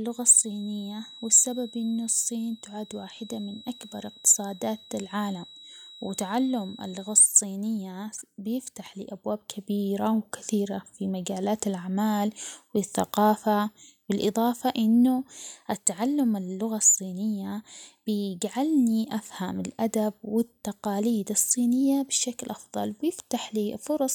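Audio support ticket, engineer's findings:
Feedback whistle, 0.0–7.3 s. Thin steady tone near 3.9 kHz, roughly 25 dB under the speech, swelling and fading slowly in level. Likely speaker-to-mic acoustic loop held just at the edge of oscillation, so the tone sustains without building up.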